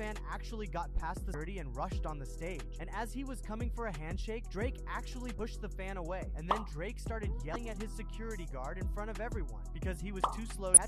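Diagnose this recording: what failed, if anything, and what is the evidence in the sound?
Damaged data in the compressed stream made the decoder lose frame sync, causing brief disruptions of about 30 ms at 1.31, 5.36, 7.53 and 10.74 s.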